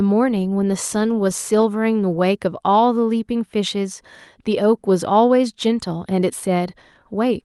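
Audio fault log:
No fault to log in this speech audio.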